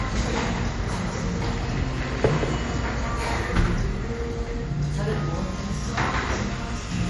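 From the first moment until 3.38 s, a doubled audio track is heard. A second copy trails by about a fifth of a second, a few decibels quieter, with no decay, and stops abruptly. A slower second capture path is the likely cause.

Throughout, MP3 compression is plainly audible. Nothing sounds above 11.4 kHz, and the texture turns watery and swirly. This likely comes from a low bitrate, around 48 kbps.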